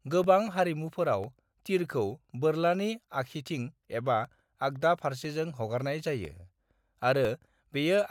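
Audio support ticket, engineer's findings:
Regular small ticks in the speech, one per second from 0.24 s to 7.25 s, about seven in all. Each is a very brief gap of around a millisecond, filled with silence. Audible only while signal present. Probable component: USB audio interface or its driver. Periodic USB or driver dropouts: a background task stalls the bus or driver on a fixed 1.0 s cycle, briefly interrupting the sample stream. Check polling tasks and power management.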